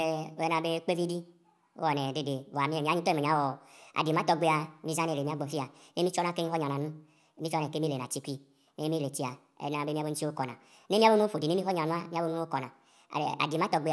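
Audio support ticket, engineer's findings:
Wrong sample rate, throughout. Playback clock 1.5 times the recording rate, no resampling stage; consistent with 16 kHz material output at 24 kHz. Speech runs 1.5x fast, pitch raised about 7 semitones, speed and pitch shifting together. Voices sound high and hurried. Probable component: output device or stream config ignoring source rate header.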